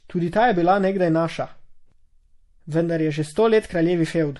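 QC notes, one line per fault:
Throughout, MP3 compression: the speech has a watery, swirling texture, with metallic chirps on s sounds and softened consonant attacks, and nothing is heard above 11.5 kHz. This is likely an MP3 encoder short of bits, the damage level fitting a bitrate around 48 kbps. It cuts the treble at a fixed point and drops weak frequency lines that flicker in and out between frames, blurring sharp onsets.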